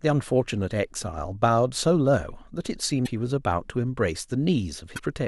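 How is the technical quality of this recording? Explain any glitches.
Three glitches mar the speech, all from damaged data in a compressed stream. They occur at 0.54 to 0.56 s, 3.02 to 3.08 s and 4.93 to 5.00 s. Corrupted bytes make the decoder misread frames and lose sync. Each is heard as a brief chirp or blip.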